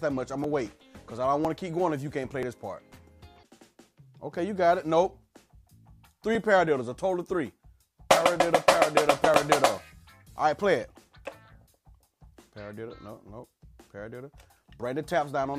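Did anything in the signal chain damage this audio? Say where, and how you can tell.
Yes, at playback, where stream segments are joined: an overlap between stream segments drops 6 to 17 milliseconds at six boundaries of roughly 1 s segments. Tiny skips fall at 0.44, 1.45, 2.43, 3.41, 6.35 and 9.34 s. Each shows as a sudden waveform step and a thin vertical broadband line on a spectrogram.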